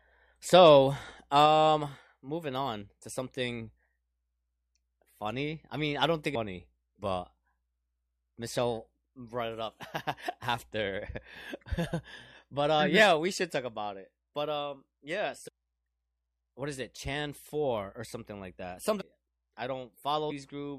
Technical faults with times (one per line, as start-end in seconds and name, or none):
15.47-15.49 damaged data in a compressed stream
19.00-19.02 damaged data in a compressed stream